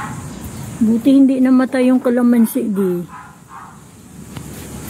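AAC frame loss with concealment occurs at 0.35–0.41 s and again at 2.61–2.67 s. Each dropout, about 43 ms long, fits a single missing frame. The decoder filled it from the last good spectrum, leaving a brief smeared, noisy, phasey blur.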